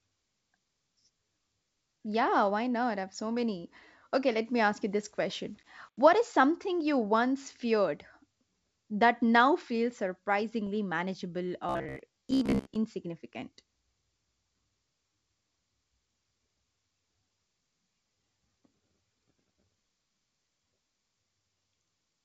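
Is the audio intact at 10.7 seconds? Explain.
No. From 10.67 to 10.69 s, bit errors on an ADPCM link upset the decoder's step size, giving a rough pop that shows as a broadband vertical streak and a brief waveform spike.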